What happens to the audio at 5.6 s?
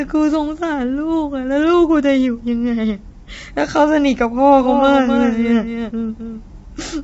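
A doubled audio track is present: the same audio was likely mixed in a second time. From 4.62 s to the end, a dry copy about 5 dB quieter trails roughly 300 ms behind, cutting in abruptly. Low-delay AAC compression also runs through this moment, consistent with AAC-ELD at a low rate, around 24 kbps. The speech sounds rough and grainy, with noise between the harmonics and nothing above 7.7 kHz.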